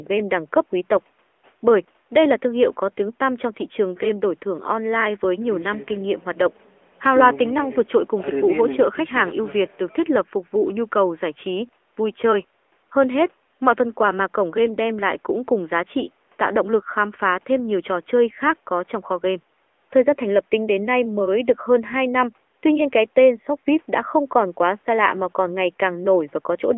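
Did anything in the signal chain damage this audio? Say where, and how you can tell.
Yes. The damage is at the codec stage: the AMR narrowband mobile codec is audible for the whole clip. The speech sits in a telephone band of roughly 300 Hz to 3.4 kHz with nothing above 4 kHz. Unlike a plain band-limiting filter, it also has a buzzy, synthetic texture, because the codec rebuilds the voice from a vocal-tract model and a few pulses per short subframe. That degree of plainly audible damage fits a mid-rate mode around 10 kbps.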